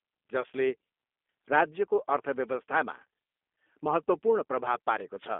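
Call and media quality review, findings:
Rough, slightly synthetic speech throughout, band-limited to roughly 250 Hz to 3.5 kHz with nothing above. Probable component: G.729 codec (G.729A variant), consistent with 8 kbit/s. Filter-plus-pulse reconstruction discards fine detail, leaving plainly audible coding damage.

Brief smear fading out at 0.41 to 0.46 s, about 30 ms of audio replaced, fitting a single lost packet. Probable component: VoIP packet loss concealed by the speech codec. Decoder extrapolated its last pitch and filter with falling gain, so the sound stays weak just after recovery.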